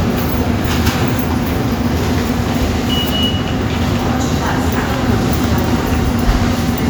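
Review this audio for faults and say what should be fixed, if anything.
No faults turn up in these sounds, so nothing needs to be fixed.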